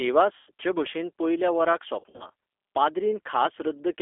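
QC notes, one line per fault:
Throughout, G.729 codec: the speech is squeezed into a 300 Hz to 3.5 kHz phone band at 8 kbit/s. The decoder rebuilds each 10 ms frame from a vocal tract filter, a pitch predictor and a few pulses, so the voice comes out plainly rough and a bit synthetic, with nothing up top.
0.37 to 0.51 s, VoIP packet loss concealed by the speech codec: about 100 ms of audio went missing just before "भशेन पयल्या वराक". The decoder kept extending its last pitch and filter and let the level sag, so the gap becomes a buzzy or noisy fading smear, and the voice stays weak or distorted as it picks back up.
2.00 to 2.28 s, VoIP packet loss concealed by the speech codec: just after "भशेन पयल्या वराक", about 140 ms was lost in short bursts spread over roughly 200 ms, none longer than 40 ms. Each hole gets patched with stretched, buzzy or noisy guesses, and because every frame leans on the one before, the voice stays weak or distorted for a while after each hole.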